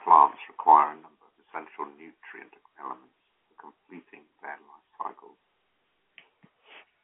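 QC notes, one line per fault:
The speech is carried over G.711 telephone coding, which fits 64 kbps A-law, with the sound held to the line band of about 300 Hz to 3.5 kHz and nothing above 3.8 kHz, and no faults are present.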